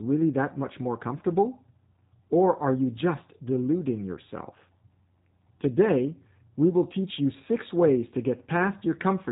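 G.729 codec damage runs throughout the speech, with nothing above 3.8 kHz. The speech is rebuilt from a vocal tract filter, pitch predictor and sparse pulses, leaving it plainly rough and synthetic, which fits G.729A at 8 kbit/s.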